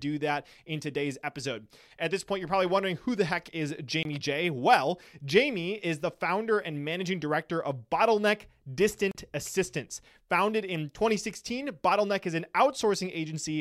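At 4.03 s the speech drops out for about 23 ms, a block of digital silence whose length fits a 1024-sample buffer. A second block follows at 9.11 s, lasting about 35 ms. In each case zeros were played in place of the audio, either because the output buffer was not filled in time or because a calculation produced invalid values. The sound stops and resumes abruptly with no fade, and both gaps are long enough to be heard as short holes.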